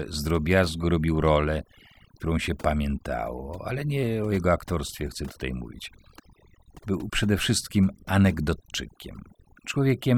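Speech runs throughout with overdone noise removal: a noise reducer set far too aggressively suppresses individual frequency bands near its noise estimate, taking quiet speech detail with them. The background drops and breaks up into twinkling specks.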